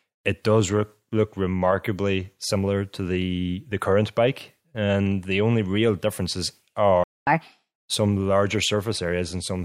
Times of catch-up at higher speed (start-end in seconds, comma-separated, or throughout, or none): 7.27-7.73